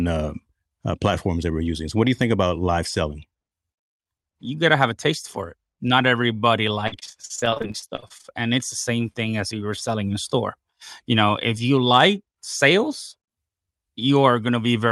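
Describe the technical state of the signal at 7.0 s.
At 7.0 s the speech sits inside a stretch of repeated packet loss (robotic sound), from 6.87 to 8.26 s, just before "and it's the same". Audio keeps dropping out in gaps up to 45 ms, each patched by extending the preceding sound, so about a third is synthetic. It sounds choppy. A spectrogram shows frozen, smeared harmonic bands broken by short vertical discontinuities, and the waveform shows repeated, copied-looking cycles.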